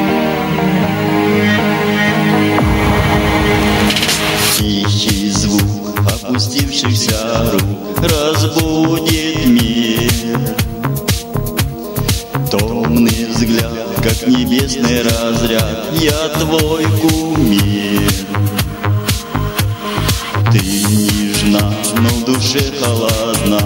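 Gain pumping runs throughout: a gain swing of around 10 dB, likely from excessive gain driving a fast limiter. The waveform looks squashed with level peaks.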